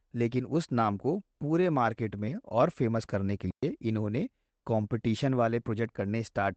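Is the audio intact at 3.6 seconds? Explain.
No. At 3.6 seconds the speech drops into a clean hole of near silence lasting about 121 ms, from 3.51 to 3.63 s, with no click or burst of noise on either side. This is a digital wireless dropout: the radio link lost too much data to rebuild the audio, so the receiver muted itself with a very quick fade instead of passing on corrupted sound, then resumed once the data came back.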